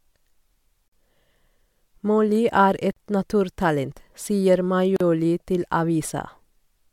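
At 0.88 s, 2.92 s (just before "et naturtalent sier") and 4.96 s (right after "er et naturtalent sier"), the speech drops out for about 40 to 45 ms every 2 s, a gap at a join of encoded pieces where untrimmed encoder padding was left in.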